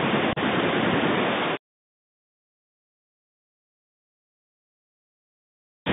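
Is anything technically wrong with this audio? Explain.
Yes. Throughout, the speech carries Bluetooth CVSD headset codec damage. The one-bit slope coder, consistent with a 64 kbps link, confines it to roughly 150 Hz to 3.7 kHz; its adapting step lags fast loud transitions, so s sounds turn scratchy over a grainy hiss. That granular texture sets it apart from simple band-limiting.

From 0.33 to 0.38 s there is unconcealed Bluetooth headset packet loss. About 34 ms of audio drops out, which fits roughly ten lost packets replaced by silence or an idle pattern. The hole has hard, abrupt edges, and the speech returns briefly quieter, unlike a smoothed or repeated concealment gap.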